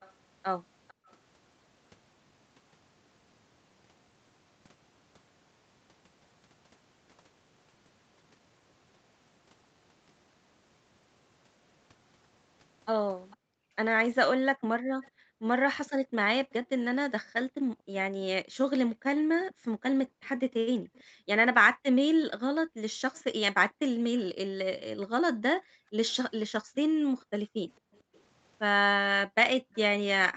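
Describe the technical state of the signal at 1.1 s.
Right around 1.1 s a faint, delayed copy of the speech trails the original by about 451 ms, roughly 30 dB below it. This runs from the start of the clip to 1.11 s. It is likely an echo leak: the far side's echo canceller let part of its loudspeaker playback through its microphone.

Just before that point, from 0.94 to 1.09 s, the room sound drops away by about 40 dB for roughly 150 ms, then returns. This is background gated by the echo canceller, which turned the microphone down hard while the loudspeaker played. The upper limit near 8 kHz reflects the call's normal microphone processing.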